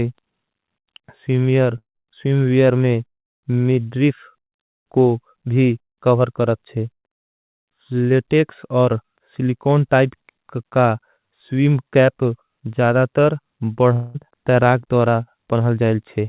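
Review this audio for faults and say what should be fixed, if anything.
Two gaps, at 1.78 to 1.97 s and 13.93 to 14.16 s, are a long network dropout, likely from lost packets. Roughly 0.18 s and 0.22 s of audio is missing, and the receiver stretches the last sound into a fading buzz. In the first gap that buzz dies into silence. Unlike a brief packet-loss click or a plain mute, it has this decaying tonal tail, and the sound resumes further on. A larger jitter buffer, forward error correction or redundancy, and a steadier network link would prevent these losses in the narrowband G.711 call path, which carries nothing above 4 kHz.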